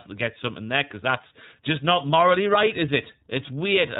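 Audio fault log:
Throughout: iLBC codec. The speech stops at a hard 4 kHz ceiling on the spectrogram and sounds plainly rough and synthetic, with independent frame coding that fits 30 ms frames.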